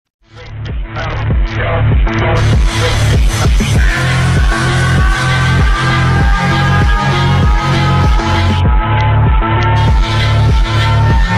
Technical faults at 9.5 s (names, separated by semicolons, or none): Bluetooth SBC bit pool drop